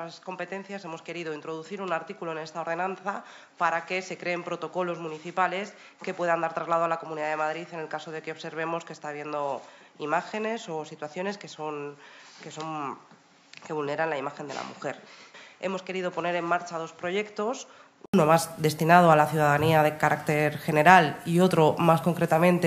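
From the start until 18.14 s the sound is dull and boxy, with nothing above 7.4 kHz, roughly 10 dB quieter, and carrying its own faint background noise well below the signal. At 18.14 s an 80 ms silence falls and full, brighter sound returns. This most likely marks an input switched to a poorer device, then back. A plain filter would not bring the gap, the level jump and the changed noise floor all at one instant.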